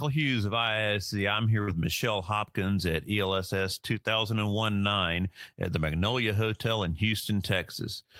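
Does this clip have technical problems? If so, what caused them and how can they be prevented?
Yes. At 1.61 s the speech briefly smears into a held, fading continuation of its last sound, then jumps ahead at 1.69 s with a small piece missing. This is a burst of packet loss: several consecutive packets never arrived in time, so the receiver filled about 58 ms by repeating and attenuating the preceding audio before playback resumed, and about 60 ms of the original speech was skipped. Prevention would rely on a larger jitter buffer, forward error correction or packet redundancy, and a less congested network path.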